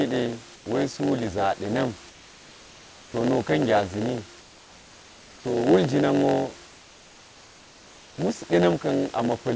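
Throughout, a block size mismatch pads each block with zeros, giving a 91.9 Hz buzz and audio running at 0.919 speed. A waveform shows regular flat gaps, and a spectrogram shows vertical stripes. At 0.56–0.66, 2.10–3.14, 4.40–5.44 and 6.66–8.18 s, the background becomes steady, featureless noise about 3 dB quieter, likely comfort noise in place of the background. On a spectrogram this looks like smooth, uniform patches.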